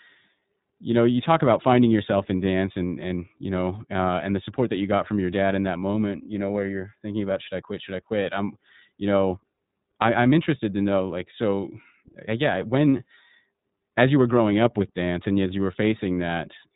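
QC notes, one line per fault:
throughout, iLBC codec: everything stops dead at about 3.8 kHz, and the speech has that slightly rough, synthetic edge you get when each short frame's excitation is coded on its own, which fits iLBC's 30 ms mode at around 13 kbps. The damage is plainly audible.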